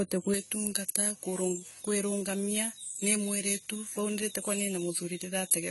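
From the start, the speech carries the smeared, warbling texture of AAC compression, most likely AAC-LC at a low rate near 32 kbps. Nothing survives above 11.5 kHz, and unlike plain low-pass filtering, sibilants fizz and swirl. At 0.34 s, pre-emphasis is left on through the end. The treble stays boosted, about 11 dB higher at 10 kHz than at 1 kHz, in a shape that fits a J.17 curve. The sound is thin, bright and sibilant. It is a steady tilt, not codec fizz.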